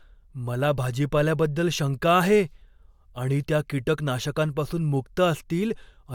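No technical faults can be heard anywhere in the recording.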